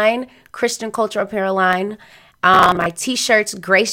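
At 1.73 s, just after "culture apparel", a single sharp click cuts through the speech. It is likely dropped samples: a fraction of a millisecond goes missing, so the waveform jumps abruptly to a later value. Unlike crackle, it is one isolated tick, with no audible gap.

From 2.54 to 2.86 s, processor overload crackle lays a gritty tearing over the speech. Around twenty of the roughly 10 ms buffers missed their deadlines, each replaying stale audio with hard edges. The result is a dense burst rather than one click, and it ends when the load eases.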